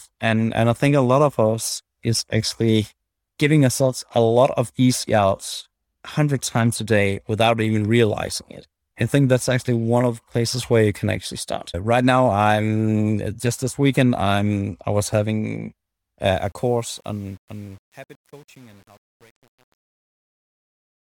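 A speech recording fades out over its last few seconds, starting around 16.35 s and ending at 21.2 s. From 16.35 s to the end, that fade carries truncation distortion. Worst from 16.77 s onward, the tail turns gritty, which fits an undithered stage holding about 8 bits. Unlike noise-gate chatter, the grit grows steadily as the level falls, because the quiet waveform collapses into coarse square steps.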